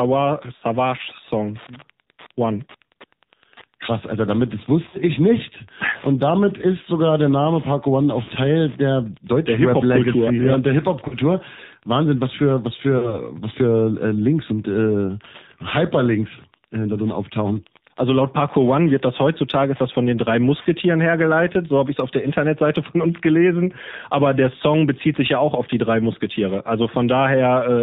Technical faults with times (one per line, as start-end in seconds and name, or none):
0.00-27.82 Wi-Fi interference
0.00-27.82 AMR narrowband mobile codec
0.56-0.64 lost AMR speech frames
4.90-4.98 lost AMR speech frames
8.24-8.30 lost AMR speech frames
11.08-11.15 lost AMR speech frames
12.98-13.20 lost AMR speech frames